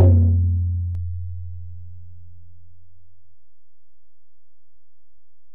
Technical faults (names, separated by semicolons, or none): DC step